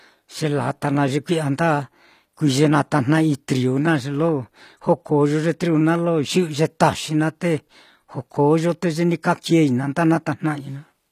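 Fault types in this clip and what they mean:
HE-AAC compression: The treble in this speech sounds rebuilt rather than captured, with damage that's plainly audible all the way through and nothing at all above about 14.9 kHz. That's likely HE-AAC, which codes only the lower spectrum and fakes the top by copying lower bands upward under a rough envelope. The highs stay bright but don't match the real harmonics, so sibilance comes out gritty and synthetic, consistent with a low bitrate around 24 kbps.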